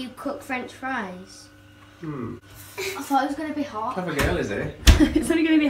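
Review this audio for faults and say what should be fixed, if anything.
Nothing to fix; no audible faults anywhere in the clip.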